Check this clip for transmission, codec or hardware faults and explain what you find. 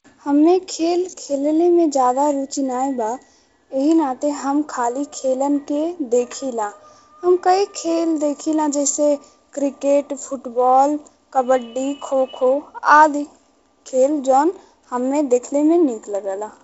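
No faults turn up in the speech, which shows the ordinary character of G.722 wideband telephone coding: content stops at 7.7 kHz, and the light codec roughness in the bands fits the 48 kbit/s mode.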